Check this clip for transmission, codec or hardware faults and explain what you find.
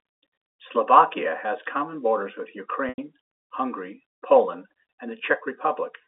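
One transmission fault appears in the speech, carried over a narrow G.711 telephone line whose band runs from 300 Hz to 3.6 kHz.

From 2.89 to 2.98 s there is packet loss with pitch repetition. About 90 ms of audio went missing, which fits nine 10 ms packets. The receiver looped the last pitch period and faded it out, so the sound becomes a held buzz that dies into silence before speech cross-fades back. On a spectrogram this shows as flat, evenly spaced harmonic stripes that dim to a gap. On the waveform, identical repeated cycles shrink to nothing.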